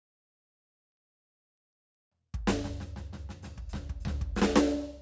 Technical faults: none

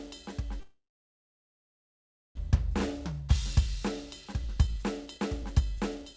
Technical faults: long network dropout; jitter buffer speed-up

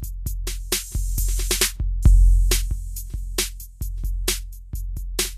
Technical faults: Vorbis compression

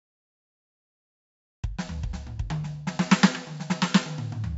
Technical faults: 4-bit ADPCM compression

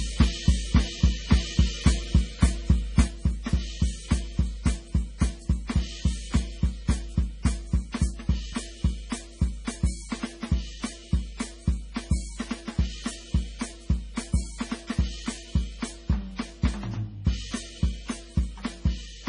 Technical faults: MP3 compression; sudden gain jump

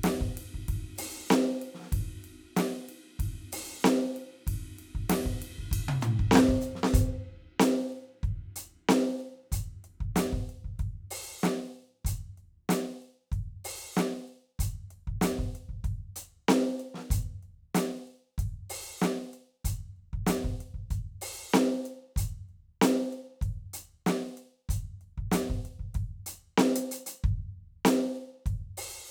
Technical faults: none

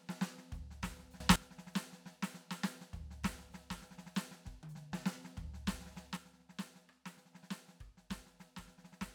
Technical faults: sudden gain jump

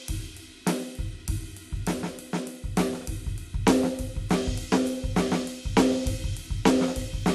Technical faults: dropped samples

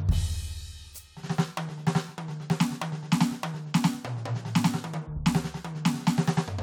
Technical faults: none

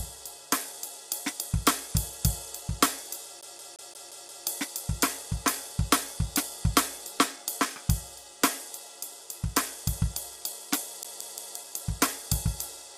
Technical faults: low-delay AAC compression; CD stuck on one turn

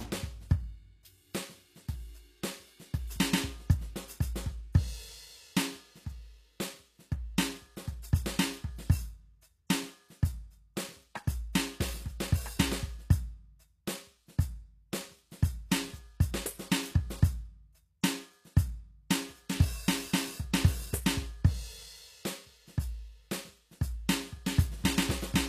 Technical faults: HE-AAC compression

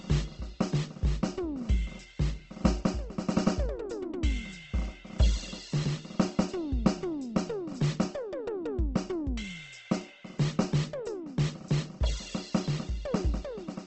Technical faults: Opus compression

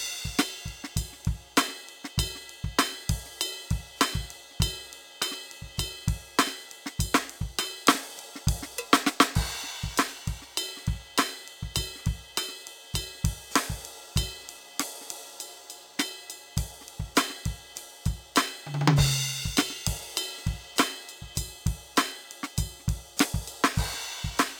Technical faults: imaging from linear upsampling

